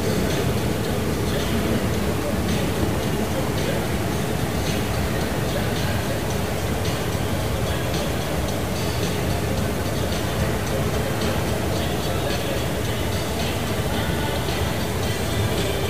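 Throughout, the audio is grainy and harsh. Likely low bit depth without dither: about 5 bits, truncated. The error tracks the signal, roughly 15 dB below it.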